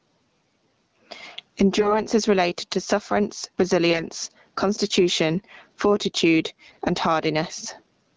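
A speech recording heard through a call path whose bandwidth stops at about 8 kHz suffers from gain pumping throughout. The level ducks as soon as a loud syllable arrives, with a swing of roughly 20 dB. The likely cause is input gain set far too high, with a fast limiter clamping each peak. On a waveform the envelope looks flattened. There are also AMR bit errors at 1.77–2.03 s, 3.90–4.06 s and 6.67–6.82 s. In these bursts the speech keeps roughly its pitch and level but turns hoarse, scratchy and gargly. Flipped bits in the less protected parts of each frame misplace the excitation pulses and skew the fine pitch, gain and spectral values. The damage grows from a few percent to well over ten percent of the bits by the last burst. A spectrogram shows smeared, noisy formants and broken harmonics in those short stretches.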